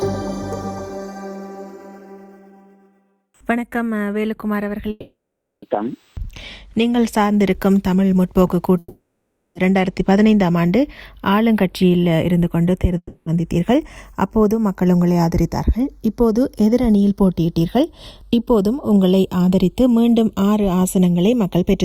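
Channels drifting apart runs throughout: the two sides sit on clocks roughly 20 ppm apart, so their offset creeps to a few tenths of a millisecond, and summed to mono this gives slow flanging.

Long network dropouts at 4.90–5.63 s, 8.78–9.56 s and 12.97–13.27 s each leave a fading buzz followed by near-silence (about 0.48 s, 0.56 s and 0.05 s) before the sound resumes with that stretch missing, likely from audio never arriving.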